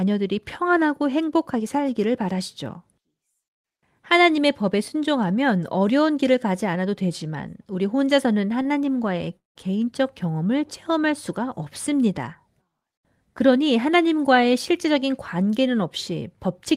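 At 8.62 s there is a short stall from a late packet. A packet arrived late and the jitter buffer ran dry. The receiver held the last sound for about 27 ms, then resumed at the same point. The speech drags briefly, with a slight buzz or dip.

From 9.37 to 9.58 s the audio stops. The last sound carries on as a fading buzz or hiss, then goes quiet for about 160 ms. Speech resumes where it stopped, delayed by about 184 ms. This is a call audio freeze, likely from packets held up in transit.

From 13.40 to 13.93 s a jitter buffer speed-up is audible. Too much audio had built up in the buffer. The receiver trimmed many tiny pitch-period slices, roughly 40 ms in total. Speech runs about 6% fast at unchanged pitch and sounds slightly rushed.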